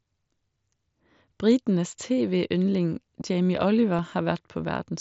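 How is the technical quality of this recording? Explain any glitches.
Two brief glitches mark this speech recording, which passes through the wideband mSBC Bluetooth headset codec, limiting it to 8 kHz with a light graininess on louder sounds.

Concealed Bluetooth headset packet loss at 3.21 s: about 7.5 ms of audio, consistent with a single lost frame, failed to arrive from the headset. The receiver filled the gap by repeating the best-matching recent stretch of waveform, so the loss is nearly hidden.

Underrun with held sample at 3.99 s: the output buffer ran dry for about 3 ms, and the converter froze at its last value until data resumed. A few milliseconds of live sound were lost, so the signal briefly flattens.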